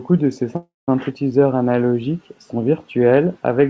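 Right after "de ces", at 0.56 s, the sound stalls until 0.89 s: a call audio freeze, likely from packets held up until the jitter buffer ran dry. The last sound is stretched into a fading buzz or hiss, then about 170 ms of silence, and speech resumes with nothing lost, just pushed later.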